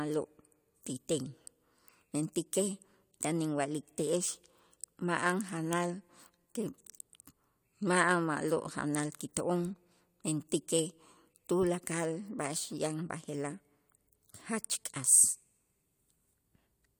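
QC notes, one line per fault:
No faults found on this speech recording; nothing to log.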